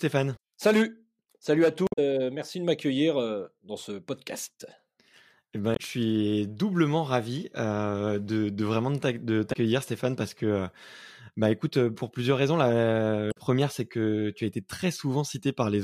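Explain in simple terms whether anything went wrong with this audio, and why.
Damaged data in a compressed stream: parts of the compressed file were corrupted, so the decoder lost its place and briefly glitched at 0.33–0.39, 1.84–1.99, 5.73–5.80, 9.49–9.56 and 13.28–13.38 seconds.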